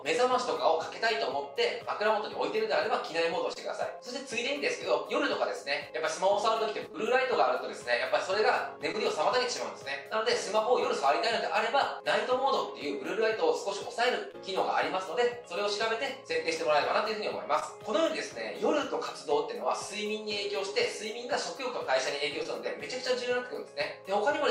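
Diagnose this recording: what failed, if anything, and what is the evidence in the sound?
Short concealed packet loss at 3.53, 6.92, 8.92, 14.31, 16.32, 17.60 and 22.43 s, a network fault: about 20 ms went missing each time and the decoder extended the preceding sound before blending back. The result is a brief smear rather than the hard silent gap of a buffer dropout.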